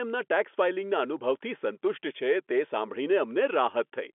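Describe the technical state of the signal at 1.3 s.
At 1.3 s the speech is intact, with no fault, only the usual narrow telephone band of G.711 coding, which leaves nothing above about 3.8 kHz.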